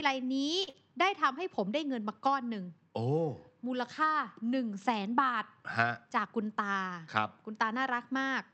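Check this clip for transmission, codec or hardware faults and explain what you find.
Three transmission faults turn up in this speech clip, two overlapping near the start and one later on, all on a call path whose Opus audio is band-limited to 8 kHz.

Short stall from a late packet, 0.63 to 0.77 s. A packet arrived late and the jitter buffer ran dry, so the receiver stretched the last sound by about 39 ms while waiting, then resumed exactly where it left off. Nothing is skipped, but that sound is held too long, and the playout delay grows by 39 ms from here on.

Short concealed packet loss, 0.69 to 0.75 s, inside the stall. About 40 ms of audio never reached the decoder in time, and the receiver covered the gap with 41 ms of synthesized continuation. It extended the preceding sound, following its pitch where voiced and using shaped noise where not, then crossfaded back into real audio. 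The result is a brief smear or wobble in the same spot as the stall.

Jitter buffer speed-up, 5.90 to 6.27 s. The buffer was holding more audio than its target, so the receiver trimmed short pitch-period-sized pieces in quick succession, removing about 50 ms in total. Playback runs at 112% speed with the pitch unchanged, and the speech in this stretch sounds hurried.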